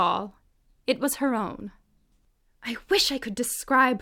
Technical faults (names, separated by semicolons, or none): none